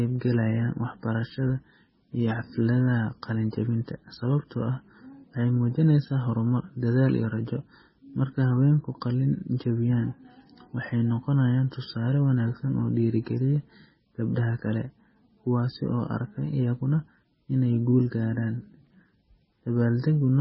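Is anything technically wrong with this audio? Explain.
Yes. MP3 compression artefacts run throughout the speech: nothing reaches above 5.6 kHz, and the damage is heavy. This likely comes from an encoder starved of bits, consistent with roughly 16 kbps, cutting the treble and dropping weak frequency lines frame by frame. The result is muffled, watery, swirling speech with smeared consonants.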